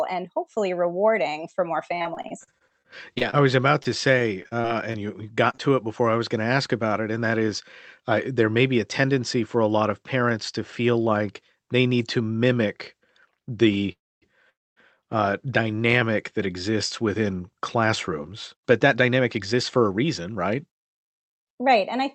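From 1.95 to 5.60 s, just after "hopefully rewarding for more" and up to "to it before I", the speech turns choppy, with small pieces dropping out again and again. This is repeated packet loss (robotic sound). Around two dozen short holes, none longer than 30 ms, were each patched by stretching the preceding sound. About 0.47 s was filled in this way and roughly 0.36 s of the original audio is gone.

From 11.14 to 11.57 s the speech briefly sounds hurried at an unchanged pitch, running at 107% of normal speed. This is a jitter buffer speed-up. The receiver was holding more audio than it needed and trimmed short pitch-period slices to reduce the delay, removing about 40 ms in total.

At 13.92 to 14.24 s and again at 14.50 to 14.78 s the audio halts. A brief fading continuation drops into a quarter-second of silence, about 0.26 s the first time and 0.25 s the second, and then the speech resumes exactly where it stopped. 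These are call audio freezes, likely caused by packets stalling in transit and emptying the jitter buffer. Each one inserts a pause of about 0.30 s and 0.27 s respectively, and nothing is lost.

From 15.47 to 15.83 s, leading into "that exists within", the speech drags slightly, with drawn-out sounds at 90% speed and the same pitch. This is a jitter buffer slow-down. The receiver repeated single pitch periods to rebuild its reserve, adding about 44 ms.

From 17.84 s, after "that exists within", to 22.03 s, the pace becomes noticeably rushed at 107% speed. This is a longer jitter buffer speed-up that trimmed about 0.3 s to bring the delay back down. Throughout the clip the Opus call path limits the audio to about 8 kHz, which fits a modest bitrate around 32 kbps.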